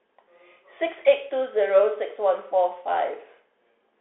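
Throughout, a Bluetooth CVSD headset codec's one-bit step coding confines speech to 300 Hz–3.5 kHz, with scratchy s sounds and granular hiss that a clean band-limit lacks.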